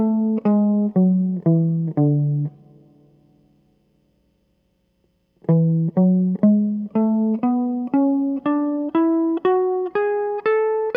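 No technical faults can be heard anywhere in this music clip.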